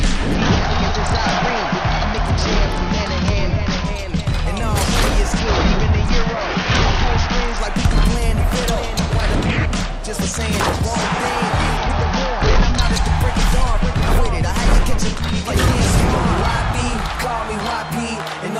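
Bluetooth SBC bit pool drop at 0.34–3.85 s, 5.39–7.6 s and 11.77–12.81 s: the treble dulls and turns gritty, which fits the bit pool falling to 8.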